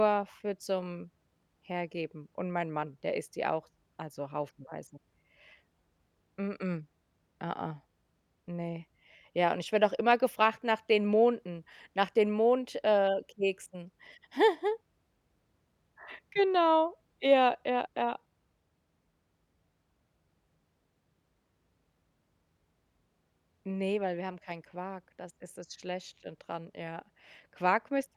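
A short speech recording, and there's nothing technically wrong to point out anywhere in it.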